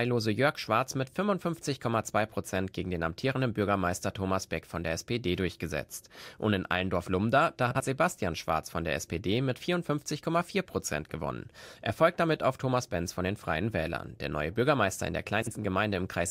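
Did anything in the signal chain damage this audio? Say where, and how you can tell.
Yes, frames out of order, a network-stage fault in which two neighbouring runs of frames arrived swapped and were decoded as received. At 7.71 to 7.80 s and again at 15.42 to 15.52 s, about 0.1 s of speech plays with its halves exchanged, giving a brief garbled flutter. A spectrogram shows formant tracks jumping backward and forward, with vertical seams at the three joins; the waveform shows abrupt discontinuities there, and no time is lost.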